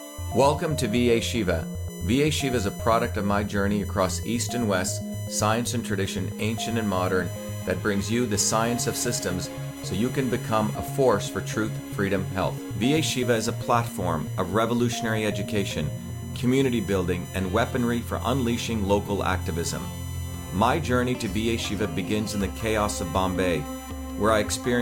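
From start to finish there's a USB whine sitting under the sound, a fixed tone on a 1 kHz base with its strongest harmonic up at 6 kHz, roughly 20 dB down. That's the bus's 1 ms frame rhythm leaking in through power or ground.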